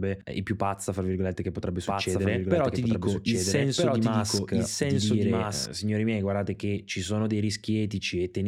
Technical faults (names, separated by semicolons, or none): doubled audio track